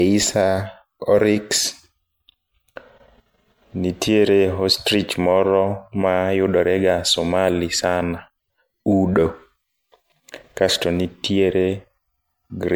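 From start to finish the speech carries a swirly, hollow smear, with consonant attacks blurred and a watery texture that a single MP3 encode at around 96 kbit/s would not produce on its own. That excess points to generation loss, likely from the audio being decoded and re-encoded around five times, each pass requantising on a shifted frame grid so the noise and spectral gaps pile up. Unlike a one-off low-bitrate encode, the bandwidth still reaches about 19.9 kHz while the degradation sits throughout the band.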